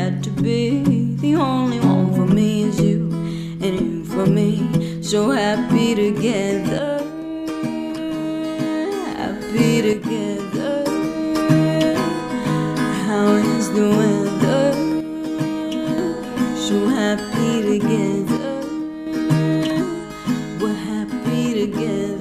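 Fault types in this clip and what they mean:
One channel drops out: the level falls abruptly by about 6 dB four times, at 6.79–9.19 s, 9.93–10.86 s, 15.01–15.98 s and 18.37–19.07 s, and each time it comes back just as suddenly. The likely cause is one side of a stereo signal going silent, so the mono sum retains only half of the material shared by both channels. Anything carried only in the missing channel disappears entirely for those spans.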